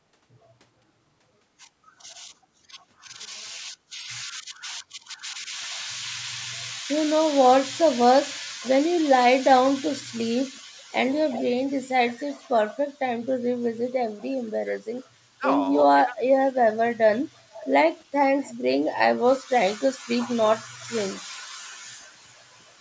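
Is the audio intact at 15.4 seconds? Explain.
No. Speech suppressed in double talk affects 15.38 to 15.44 s: the speech briefly dips steeply. The likely cause is an echo canceller that, with both sides talking at once, could not separate the talker from loudspeaker echo and attenuated both.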